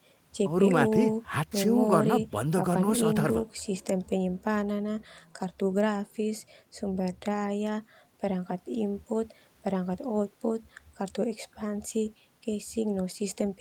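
No technical faults are audible.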